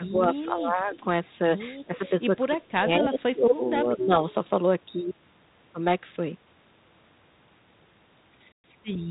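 From the start to 0.95 s, and again at 1.39 to 1.51 s, 1.85 to 3.62 s and 3.83 to 4.18 s, the speech dips by up to about 15, 5, 20 and 10 dB. This is speech suppressed in double talk, likely the echo canceller ducking the near talker while the far side spoke.

At 0.95 to 1.04 s a faint echo leak sits about 25 dB below the speech, a delayed copy roughly 218 ms late. It is likely residual loudspeaker pickup that the canceller missed. It is an added trailing copy, not a loss of level.

At 8.52 to 8.67 s, packet loss on an ADPCM call cuts a hard-edged 120 ms hole. The speech resumes slightly distorted and gritty for some tens of milliseconds while the predictor resynchronises. That recovery smear sets it apart from a clean dropout. The G.726 coding itself, consistent with 32 kbit/s, passes nothing above 4 kHz.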